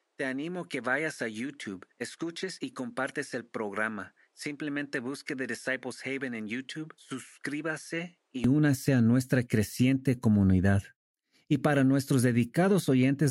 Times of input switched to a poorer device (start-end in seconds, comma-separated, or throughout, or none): 0.00-8.44